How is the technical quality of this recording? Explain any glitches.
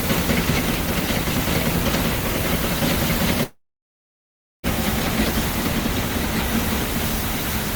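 The recording has one clear glitch, a gap in the middle of the clip.

Long network dropout, 3.43 to 4.66 s: about 1.2 s of audio likely never arrived. The receiver briefly stretched the last sound into a fading buzz or hiss, then left roughly 1.06 s of near-silence before the sound resumed with the missing part gone.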